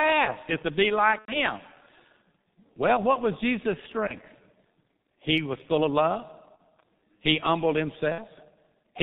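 Throughout the clip, the G.723.1 codec muffles and roughens the speech. Its heavy low-rate coding, consistent with the 6.3 kbit/s mode, blurs consonants. On a spectrogram, energy stops sharply at 4 kHz, and formant detail looks smeared in coarse 30 ms steps.

VoIP packet loss concealed by the speech codec occurs at 1.19–1.36 s, 4.07–4.14 s, 6.56–6.61 s and 8.12–8.21 s. The first gap is about 90 ms, which fits three lost 30 ms frames. The decoder repeats its last pitch and filter, producing a buzzy tone or coloured noise that fades. This shows as a stretched, repeated pattern with a shrinking waveform envelope before the speech recovers.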